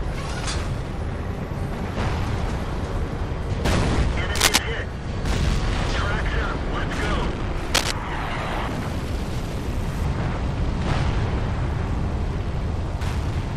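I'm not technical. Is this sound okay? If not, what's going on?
No. There's cable scratch noise: brief rough rustling bursts from 4.35 to 4.58 s and 7.74 to 7.91 s, likely a worn cable or connector being moved. Unlike a single click, each burst is a dense scratchy crackle.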